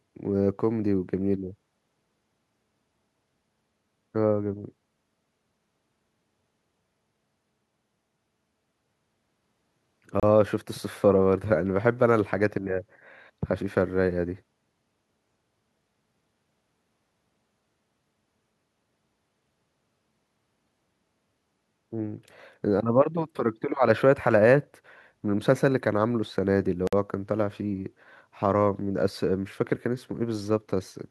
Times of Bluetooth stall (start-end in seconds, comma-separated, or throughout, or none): 10.20-10.23, 26.87-26.93